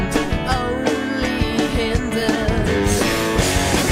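At 2.61 s to 2.67 s there is AAC frame loss with concealment: about 43 ms, which fits a single lost frame, is rebuilt from the preceding spectrum, giving a brief smeared, noisy patch rather than the hard silent gap of a plain dropout.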